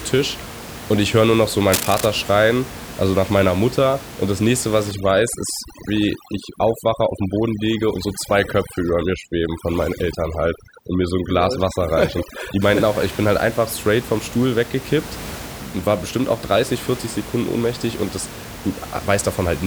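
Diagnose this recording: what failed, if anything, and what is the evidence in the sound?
Analogue wiring, likely cable scratch noise: just after "höre nur noch so", 1.72–2.06 s, a fluctuating contact adds ragged bursts about 5 dB below the speech. On a spectrogram they appear as broadband vertical smears.

Call processing, overdone noise removal: from 4.91 s ("das nächste was") to 12.62 s, an aggressive suppressor mutes individual frequency bands. The background becomes sparse specks. On a spectrogram this shows as gaps between isolated flecks.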